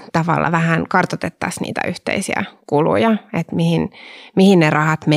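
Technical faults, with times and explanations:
0.52 s and 1.64 s, dropped buffer (overrun). At each point the speech jumps forward with no gap of silence. The first skip is tiny, a few milliseconds. The second is larger, around 20 ms. The likely cause is that the recording software fell behind and the hardware overwrote samples it had not yet collected. The audio on either side of the lost piece is then butted straight together.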